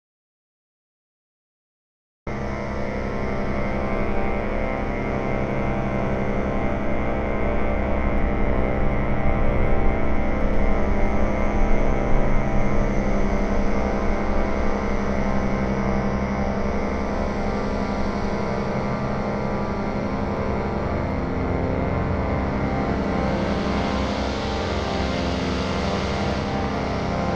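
The audio opens in complete silence, with no room tone at all, until the sound cuts in abruptly at about 2.27 s, mid-flow rather than with a natural onset. This is an audio dropout to silence already under way from 0 s, likely caused by the input being lost while the recorder kept writing silence.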